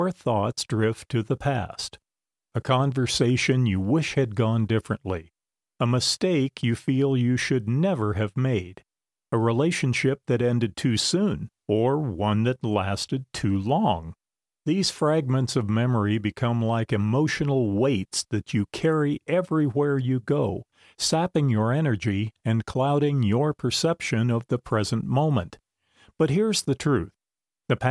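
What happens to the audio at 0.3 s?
Nothing goes wrong at 0.3 s, and the audio plays through that moment intact.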